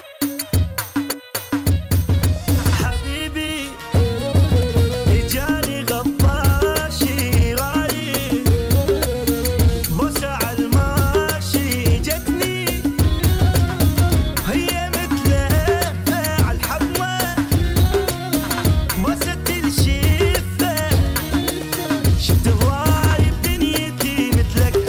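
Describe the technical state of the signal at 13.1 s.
At 13.1 s the signal is intact, with no dropout, distortion or other technical fault.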